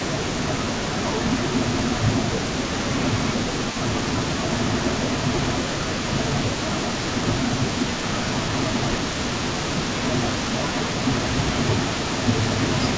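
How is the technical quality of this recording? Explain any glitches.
The speech carries two faults: a constant trailing echo and repeated dips in level. Its bandwidth stops at 8 kHz, which fits a G.722 call path at 64 kbps.

Echo leak: from start to end, a copy of the speech trails by 237 ms, about 10 dB down. This is likely a far-end loudspeaker echo the canceller failed to remove.

Speech suppressed in double talk: the speech ducks by up to about 10 dB at 0.09–0.29 s, 1.5–1.67 s, 2.4–4.01 s, 4.88–6.85 s, 7.76–8.0 s, 8.78–10.1 s, and from 11.49 s to the end. The likely cause is the canceller attenuating everything while both sides talked.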